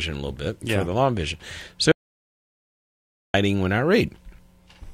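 The input feeding the recorder was most likely lost for a stretch, through a disconnected device, a failed link or a stray mute, while the recording carried on writing silence. The result is an audio dropout to silence from 1.92 s to 3.34 s: the sound cuts out abruptly in mid-flow and returns just as suddenly about 1.42 s later. The gap holds no room tone at all, and whatever sounded during it is gone.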